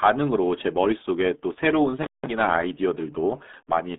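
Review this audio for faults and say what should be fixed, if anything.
The speech runs through the RealAudio 14.4 codec for its whole length. A spectrogram shows nothing above 3.8 kHz and energy confined to about 200 Hz to 3.6 kHz, and the heavy coding damage makes it sound muffled and gargly, which fits an 8 kbit/s dial-up speech codec. To prevent this, archive and deliver from a wideband source rather than a low-rate modem-era encode.

An intermittent contact cuts the signal from 2.03 to 2.27 s. The line stays open for about 170 ms. On the waveform this appears as a near-flat gap of faint hiss, with sharp crackle spikes at both edges where the loose connection breaks and remakes. To prevent this, reseat or replace the faulty cable or plug and strain-relieve it before recording.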